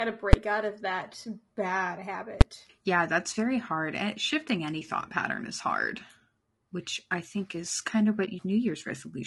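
Throughout the recording the speech sounds rough and grainy, with a noisy haze between the harmonics and a thin, synthetic top band. This is likely low-delay AAC compression (AAC-ELD), whose short frames resolve pitch poorly, and the damage fits a bitrate of around 32 kbps.

At 0.33 s, just before "out of that bad", there is a single loud bang. It recurs at 2.41 s, right after "out of that bad". Each time, invalid numbers at full scale pinned the output to one extreme value for about 5.8 ms, which fits a 256-sample processing block.

At 8.25 s, just after "think is kind of", the sound dips briefly for 20 ms. This AAC frame loss with muting is consistent with one lost frame whose spectrum the decoder zeroed, while the overlapping windows faded the sound out and back in.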